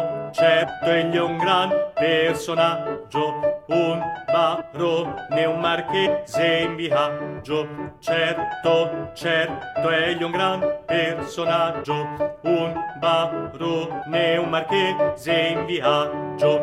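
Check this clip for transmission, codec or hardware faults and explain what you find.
There's one problem: compressed frames skipped, at 0.63–0.65, 4.60–4.62, 6.05–6.07, 11.83 and 14.01 s. Lost or rejected frames make the audio jump ahead 0.07–0.15 s each time.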